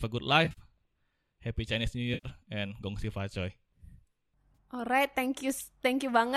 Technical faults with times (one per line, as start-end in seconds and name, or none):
0.45-0.60 AAC frame loss with concealment
2.13-2.27 AAC frame loss with concealment
4.55 AAC frame loss with concealment